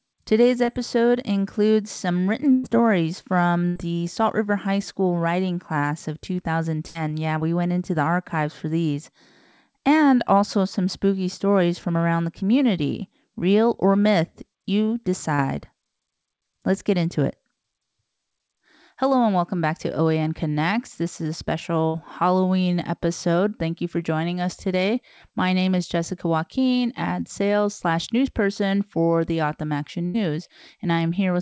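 Short concealed packet loss at 0.64 s, just before "includes some written": about 40 ms of audio reached the decoder too late, so the receiver carried the preceding sound forward and blended back into the real signal, leaving a brief smear.

A burst of packet loss follows at 2.52 s. Several consecutive packets, about 120 ms in all, went missing. The receiver stretched the last sound into a held buzz or hiss, lowered it as the gap continued, then resumed further on with that stretch gone.

Shorter bursts of about 80 ms recur at 3.68 s and 6.88 s.

A second short concealed packet loss at 15.35 s, right after "or myth you", gives the same quick smear.

Further 80 ms bursts follow at 21.87 s, after "is a", and at 30.06 s.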